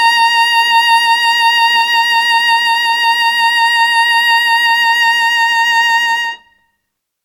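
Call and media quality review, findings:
No audible faults found.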